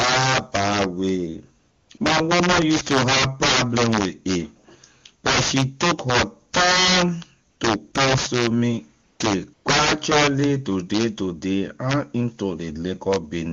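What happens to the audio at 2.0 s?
A brief patch of smooth, steady hiss replaces the real background at 1.97 s, just before "my woman use to". This is AMR comfort noise: a 20 ms gap judged silent was filled with synthetic noise. Sharp, violent cracks also hit the louder peaks. This is integer overflow: the signal, driven about 13 dB too hot, wraps to the opposite sign on a small share of samples instead of being limited.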